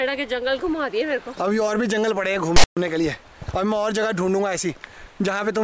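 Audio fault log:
2.56 to 2.77 s, file tags played as audio: a block of tag data got decoded as if it were samples, so for about 0.2 s you get a hard-edged burst of static. The text bytes come out as a loud rasp sitting off to one side, since character codes cluster in a narrow positive range instead of swinging around zero, and the zero padding after them drops to dead silence before the audio resumes.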